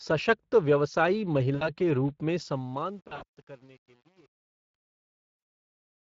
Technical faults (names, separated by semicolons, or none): Speex codec; VoIP packet loss concealed by the speech codec; truncation distortion on a fade